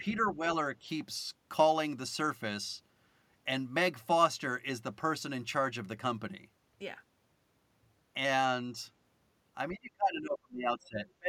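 At 0.0 to 0.04 s and again at 0.36 to 0.49 s the speech level dips briefly by a few decibels, and from 9.72 s to the end it falls away much harder, by roughly 30 dB, for about one and a half seconds. This pattern is most likely speech suppressed in double talk: with both ends talking, the echo canceller treated the near talker as echo and attenuated it along with the loudspeaker signal.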